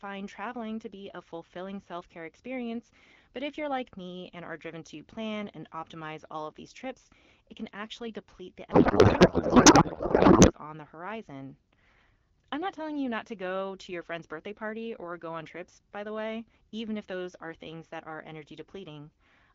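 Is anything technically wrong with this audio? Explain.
Yes. From 8.71 to 10.52 s the speech turns into a codec payload misread. The AMR frames are octet-aligned but get decoded as bandwidth-efficient, so every field is read from the wrong bit position. For about 1.8 s the speech becomes garbled noise and warble that barely follows it. Packet loss would bring gaps or smeared repeats. This stays continuous and codec-shaped, then snaps back to the clear wideband sound, which fits a rate near 12.65 kbit/s.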